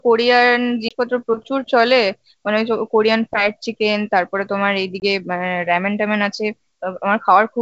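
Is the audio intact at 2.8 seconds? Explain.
Yes, at 2.8 seconds the speech is intact, carried cleanly through G.722 wideband telephone coding at 64 kbit/s.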